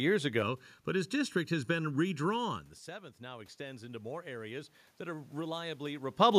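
A speech recording with two system faults. From 0.43 to 2.73 s there is channel delay (comb filtering): one channel arrives late by roughly 0.7 ms, and when the two are summed to mono the shared signal cancels at evenly spaced frequencies, with the first notch near 700 Hz and further notches stacked above it. The voice sounds hollow and phasey, as though heard through a tube, and the notches stay fixed in place rather than sweeping. From 2.98 to 6.08 s the automatic gain rises. The level reaching the microphone drops by about 17 dB after the talker moves back around 2.5 s, and the gain control responds by lifting its gain by about 7 dB over roughly three seconds. The voice and the room noise swell together as the gain climbs, so the background grows louder along with the speech.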